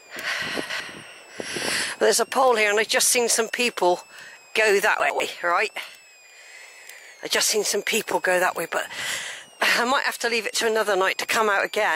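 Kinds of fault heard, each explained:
Switching supply whistle: a faint high whistle near 3 kHz, drifting between about 2.1 and 2.9 kHz, from a power supply oscillating in its audible range.
Chunks out of order: jumbled moments at 0.4–0.8 s and 5.0–5.2 s, where 100 ms chunks arrive late and play after later audio.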